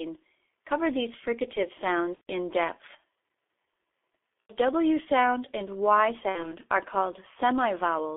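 The whole recording runs through the G.723.1 codec at about 6.3 kbit/s. Nothing passes above 3.5 kHz. The speech sounds heavily muffled and hoarse. Consonants blur.

VoIP packet loss concealed by the speech codec occurs three times. At 2.15 to 2.28 s, about 120 ms goes missing. At 4.41 to 4.54 s, about 90 ms goes missing. At 6.29 to 6.49 s, about 60 ms goes missing. Each gap fits a few 30 ms frames. The decoder stretches the last sound into a fading buzzy tone or coloured noise, and the voice stays weak briefly after audio returns.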